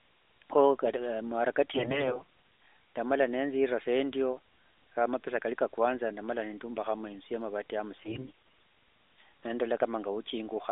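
From 1.70 to 2.22 s, and again from 8.00 to 8.30 s just after "neyumbahira inzu ya amavati", the narrowband phone speech turns hoarse, scratchy and gargly. These are AMR bit errors: flipped low-priority bits misplace excitation pulses and skew pitch, gain and spectral detail, around one bit in ten in the first burst and more in the second. Unlike frame loss, there is no gap or muting, and pitch and loudness roughly hold.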